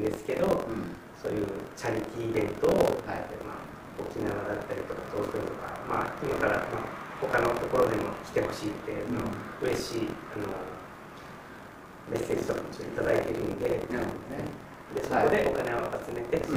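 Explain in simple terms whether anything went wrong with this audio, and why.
Buffer tearing: the program filling the playback buffer and the hardware reading it slipped out of step, so about a fifth of each chunk replays sound from roughly 70 ms earlier. Throughout, this causes a steady robotic buzz at 43.1 Hz, which fits a 1024-sample buffer.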